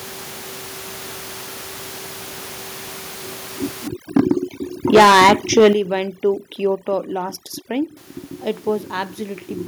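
From 3.88 s to 7.97 s, overdone noise removal takes hold. The room noise, which elsewhere sits about 23 dB below the speech, collapses to near silence flecked with twinkling specks, and the quieter parts of the speech are switched off along with the noise bands. Unlike a low-bitrate codec, which smears the whole signal, the damage here tracks the noise floor: it is the background and the soft edges of the speech that vanish.

Within that stretch, microphone overload hits twice, from 4.16 to 4.32 s and again from 4.94 to 5.68 s. The peaks likely ran about 9 dB and then about 12 dB past the converter's ceiling, flattening their tops, with a small share of samples cut in the first burst and a noticeably larger share in the second. The result is a harsh, crackling edge on the loudest moments. Because the grit follows the peaks of the sound rather than appearing as a steady buzz, it points to clipping at the input rather than to an overdriven playback speaker.

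Each overload brings a microphone volume step down. The first is a small dip of about 2 dB at 4.17 s, and the second is a much larger drop of about 9 dB at 5.73 s, just as the clipping ends. Speech and background fall together in a single abrupt step, likely the call software cutting the device's input gain in response to the distortion. A smooth automatic gain ramp would ease down gradually instead of dropping all at once.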